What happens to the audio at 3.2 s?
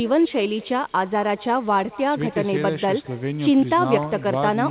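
At 3.2 s the speech carries an echo with no canceller, as it does through the whole clip. The far end's loudspeaker feeds its microphone, and the sound returns about a fifth of a second later. It comes back as a faint, thin copy, about 23 dB down.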